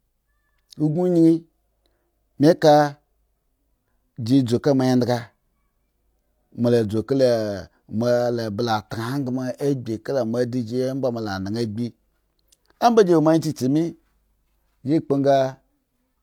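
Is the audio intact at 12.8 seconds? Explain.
Yes, the speech at 12.8 seconds is intact, with no fault present at that moment.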